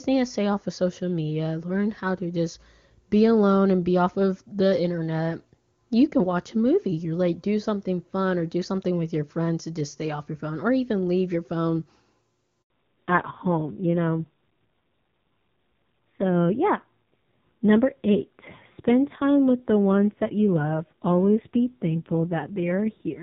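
At 12.62 s there's a handover gap: the call switched networks and no frames came through for about 80 ms, so the speech cuts out briefly before the new link picks up. Whatever was said in that moment is just gone.

Right after, from 12.70 s to the end, you get a fallback to narrowband. The call starts at wideband quality, which points to AMR-WB at around 23.85 kbit/s, then drops to what sounds like AMR-NB at 5.9 kbit/s. Nothing above 4 kHz survives, so the speech turns duller and rougher.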